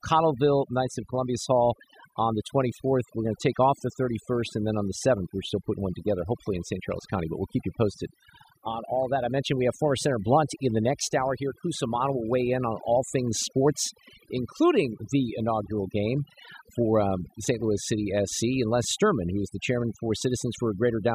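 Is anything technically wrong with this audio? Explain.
Yes. Throughout the speech, there is overdone noise removal. Frequency bands near the estimated noise floor are pushed to nothing, taking quiet voice detail with them. Twinkling specks in a near-silent background set it apart from a noise gate's whole-signal pumping.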